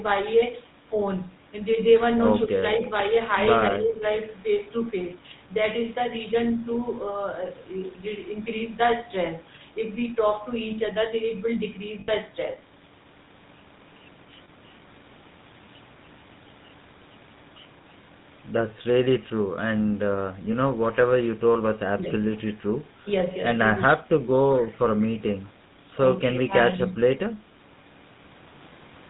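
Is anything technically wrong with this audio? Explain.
Yes. The whole clip carries the GSM full-rate codec: pulse-driven vocal-tract modelling leaves buzzy, gravelly speech, and a spectrogram shows nothing above 4 kHz. This fits 13 kbps GSM.

Speech suppressed in double talk at 2.45–2.91, 3.70–4.05, 21.96–22.05, 23.88–24.03 and 26.25–26.80 s: the level dips by roughly 5 to 15 dB, likely from an echo canceller ducking during simultaneous talk. The waveform shows brief envelope notches.

Lost GSM frames at 12.00–12.11 s (80 ms) and 14.44–14.49 s (40 ms): the last good frame is repeated, producing a metallic held ring. The spectrogram shows smeared, frozen bands.

Echo leak at 25.00–25.05 s: a faint copy arrives 191 ms late at about −30 dB, likely from incomplete cancellation of loudspeaker pickup. It appears as a weak, delayed ghost trace.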